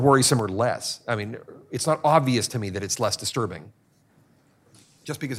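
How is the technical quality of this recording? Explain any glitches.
The recording has one glitch. Sudden gain jump at 0.40 s: the speech and background noise drop together by about 4 dB and stay lower to the end, likely from a gain setting applied without any ramp.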